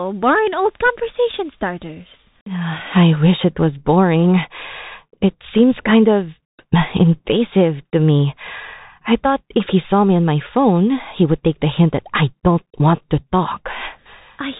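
Throughout the speech, the sound is narrow and boxed-in, with nothing above 3.8 kHz, scratchy sibilants and a grainy hiss underneath. This is the Bluetooth CVSD headset codec, whose one-bit delta coding, consistent with a 64 kbps link, cannot track fast high-frequency detail.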